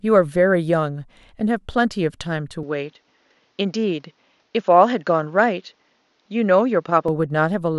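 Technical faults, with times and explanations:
2.63 to 7.08 s, input switched to a poorer device: at 2.63 s the speech abruptly loses its top end, with nothing above 7 kHz, and stays dulled and narrower until 7.08 s, when the fuller sound returns. There is no gap at either switch and the level holds steady, but a new noise floor appears about 45 dB below the signal. This is likely a change of capture device mid-recording, with the stand-in microphone or headset passing a narrower band and carrying its own tone and background noise.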